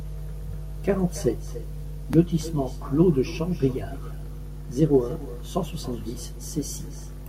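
Echo with no canceller: the far-end microphone recaptures its loudspeaker, so throughout, speech returns roughly 300 ms later, about 16 dB quieter.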